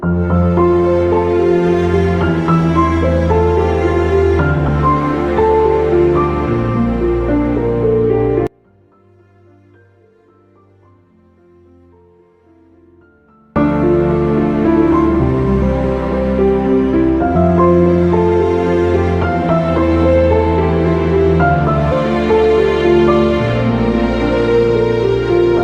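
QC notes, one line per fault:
8.47–13.56 s, one channel inverted: The level collapses by about 36 dB for roughly five seconds, leaving only a faint residue before full level returns. This is likely one stereo channel flipped in polarity while the pair is heard folded to mono. Everything the two sides share cancels, so almost all of the sound disappears, background included. All that survives is the small difference between channels, which is why it sounds so faint.
21.91 s, compressed frames skipped: The audio jumps forward by about 200 ms. Around ten consecutive blocks of the encoded stream were never played, either missing or rejected by the decoder as corrupt, and each block is 21.3 ms long, so the jump is a whole number of them.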